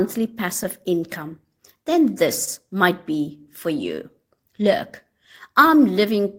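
It's a speech clip, and the clock drift between sender and receiver runs the whole way through. The sender's clock is ticking around 2 percent slower than the receiver's, so the jitter buffer keeps running a little short of audio. The receiver has to keep patching that, which gives small, unevenly spaced timing hiccups all the way through, more a restless feel to the pacing than anything you'd call a dropout. There is also a short stall from a late packet between 2.44 and 2.48 s. A packet didn't turn up in time, the buffer ran dry, and the receiver held the last bit of sound for about 28 ms until it arrived, then carried on from the same spot. Nothing is actually lost; you just get a sound hanging on a touch too long. Then from 3.95 s to 6.35 s there are repeated timing corrections. The receiver keeps repeating tiny slices to make up for the slow sender, effectively playing that stretch at about 98 percent speed and padding in something like 50 ms in total. 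The edits all push the same way but land at irregular gaps, so that tail has a slightly stretched, uneven tempo.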